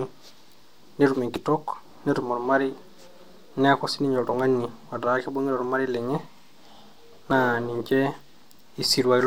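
At 1.36, 4.33 and 7.31 s the speech skips forward with a slight jolt, audio missing between chunks spaced 3 s apart, likely from a short slice, around 20 ms, being lost at each handover. A waveform shows abrupt splices, and a spectrogram shows vertical discontinuities.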